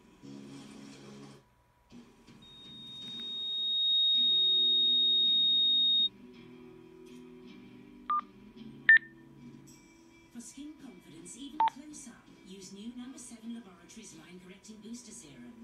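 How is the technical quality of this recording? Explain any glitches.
The recording is marred by one serious fault. From 2.42 to 6.09 s there is loudspeaker feedback squeal: the microphone picked up its own loudspeaker and the loop gain passed one at 3.7 kHz, so that tone fed itself, swelling over about a second and a half into a piercing squeal roughly 10 dB above the sound.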